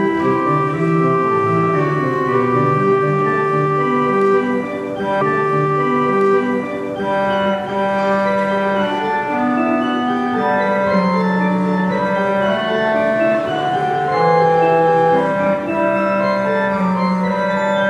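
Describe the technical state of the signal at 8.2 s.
At 8.2 s the signal is intact, with no dropout, distortion or other fault present at that moment.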